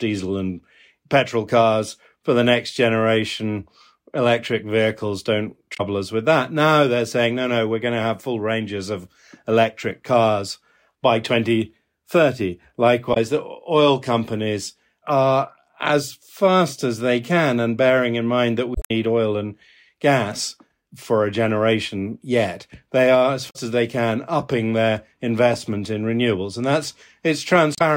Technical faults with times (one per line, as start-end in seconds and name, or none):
5.74-5.80 damaged data in a compressed stream
13.10-13.17 damaged data in a compressed stream
18.72-18.91 damaged data in a compressed stream
23.46-23.56 damaged data in a compressed stream
27.72-27.82 damaged data in a compressed stream